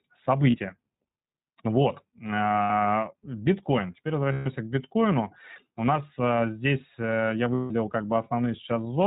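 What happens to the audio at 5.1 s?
At 5.1 s, as across the whole clip, the iLBC codec codes each 20 ms frame independently within a narrowband channel, consistent with roughly 15 kbps, leaving speech audibly rough, synthetic and dull, with nothing above 4 kHz.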